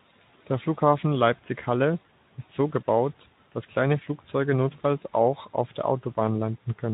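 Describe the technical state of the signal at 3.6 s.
At 3.6 s the speech is intact, with no fault to be heard at that moment.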